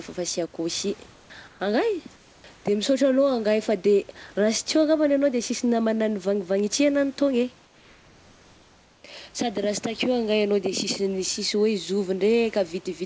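Speech clip, and in four short pauses the real room background drops out for comfort noise: 1.12–1.30 s and 1.48–1.60 s after "sy ao koa sy", then 2.16–2.44 s and 2.56–2.64 s. The gaps turn flat and featureless, about 2 to 3 dB quieter except the second, likely from discontinuous transmission on this band-limited call path, which carries nothing above 8 kHz.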